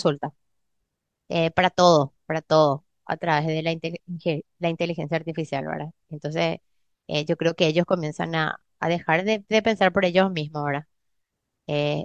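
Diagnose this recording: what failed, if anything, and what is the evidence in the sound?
Nothing in the speech recording points to a failure at any stage of the chain. There is no event in the sound to time or trace back to a mechanism.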